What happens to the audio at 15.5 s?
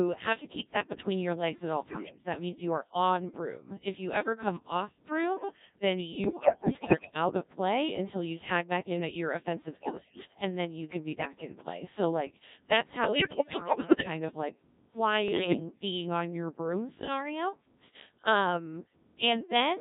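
At 15.5 s the audio is inside a burst of bit errors on digital voice radio, running from 15.28 to 15.60 s and ending just before "being on your broom". Corrupted bits in the vocoder frames scramble the pitch, level, voicing and spectral parameters, so the synthesised sound jumps erratically and dissolves into warbling, bleepy gibberish. The span fits roughly seven damaged frames, with around one bit in ten flipped.

Underneath, the whole clip is carried by the Codec 2 vocoder, and its heavy damage is present at this moment too. The decoder does not keep the waveform. It rebuilds the speech from sine waves driven by transmitted pitch, voicing, energy and envelope values, which gives the robotic, buzzy character. The sparseness of the result points to a very low-rate mode, consistent with about 1.3 kbit/s.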